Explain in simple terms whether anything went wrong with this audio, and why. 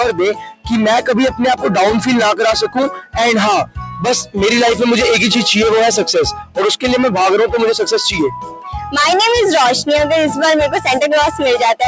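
Yes, something went wrong. A noise suppressor built for speech was left switched on, so this is a case of a noise suppressor applied to music or sounds. It mistakes steady tones, room ambience and echo for background noise and keeps turning them down. Sudden attacks get through. Held sounds and fading tails sink. Across the whole clip the level rises and falls noticeably, so the sound pumps and thins out. It does not stay even.

In a few places the effect is much stronger. This is sound cut by the noise suppressor. Parts of the audio drop away sharply, deeper than the general pumping. This happens from 0.33 to 0.71 s, 2.66 to 3.18 s, 3.64 to 4.04 s, 6.33 to 6.58 s, and 8.34 to 8.71 s. The last dip, at 8.34 s, is milder than the others. Each dip lasts about half a second or less. Steady or decaying parts sink or end too early.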